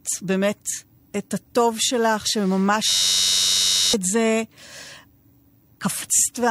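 From 2.88 to 3.94 s a system hang loop froze the driver while the hardware replayed one 10.67 ms buffer, which fits a 512-sample buffer, producing a steady 93.8 Hz buzz and dropping about a second of speech. At 6.02 s damaged data in the compressed stream made the decoder lose sync, a brief fault of about 18 ms.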